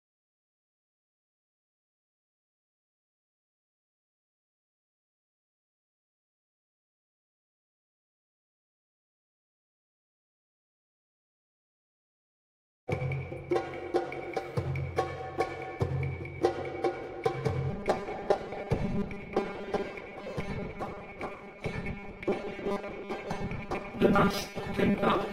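From 17.70 s right through to the end at 25.33 s, the audio takes on robotic sound from repeated short buffers: a rigid, metallic buzz at 200 Hz that only loosely tracks the underlying sound. That rate fits a 5 ms chunk being played over and over, so the likely cause is new audio arriving too seldom, with the software filling gaps by repeating the last bit. About half of that stretch is repeated material rather than real audio.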